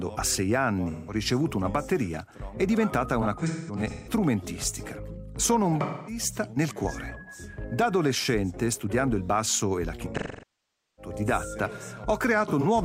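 Smeared, noisy patches at 0.90–1.14 s, 3.21–4.13 s, 5.81–6.22 s, 10.17–11.13 s and 12.48–12.65 s, the longest sinking toward silence: AAC frame loss with concealment, the decoder rebuilding missing audio from the last good spectrum.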